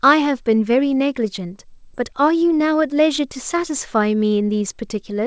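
It's a short speech clip that comes through a call path with nothing above 8 kHz, which fits G.722 at 64 kbps. At 1.94 to 1.96 s there's a skip ahead: playback jumps forward with no gap at all, so roughly 0.7 s of the talker is simply gone and the two sides are butted together. That's a chunk being dropped, either in transit or by the jitter buffer, while newer audio was already queued, and the delay drops by the same amount in one go. Right after that, from 2.08 s to 5.10 s, you get a jitter buffer speed-up. The pitch stays the same but the delivery runs at about 106% and feels a bit rushed. The buffer was still holding more than its target, so it kept snipping out tiny pitch-period-sized pieces, and together they add up to something like a fifth of a second.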